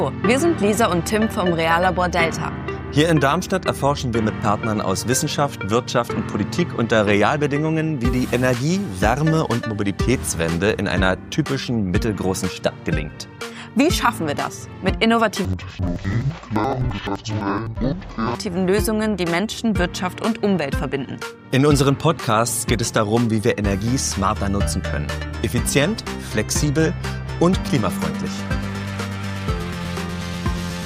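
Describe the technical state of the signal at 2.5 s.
The signal at 2.5 s is intact, with no fault to be heard at that moment.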